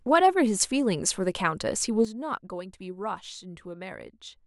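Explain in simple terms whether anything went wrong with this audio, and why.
Yes, at 2.05 s there's a sudden gain jump: the speech and its background noise drop sharply together to the end, likely a level setting applied without any fade.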